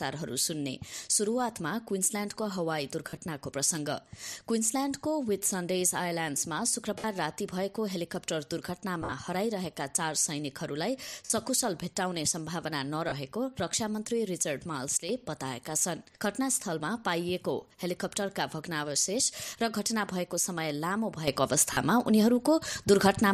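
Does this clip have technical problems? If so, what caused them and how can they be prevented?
Yes. Lost LE Audio frames occur at 3.09–3.17 s, 6.98–7.04 s, 9.02–9.12 s, 11.25–11.30 s, 13.09–13.12 s, 17.61 s and 21.73–21.77 s. The gaps run from about 10 ms to 80 ms. At 3.09 s and 9.02 s the losses are scattered over 80 ms and 100 ms, with the longest runs around 40 ms and 50 ms. The durations fit whole 10 ms frames going missing on the Bluetooth link. At each gap the LC3 decoder filled in by repeating the last spectrum with randomised phase, so tonal parts briefly smear into noisy hash instead of dropping out cleanly. The longer gaps fade as the concealment decays. Better radio conditions or a more robust link configuration with retransmission headroom would prevent these losses.

Sudden gain jump: from 14.97 s to 15.09 s the level drops by about 7 dB, then comes back. At 21.28 s it jumps up by about 8 dB and stays there to the end. 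In both cases the sound and the background noise shift together in a single step, with no fade. The likely cause is a digital gain setting applied from one sample to the next without a ramp. Smoothing every gain change over a few milliseconds would prevent these jumps. The light lossy compression in the clip is present but isn't causing a separate problem here.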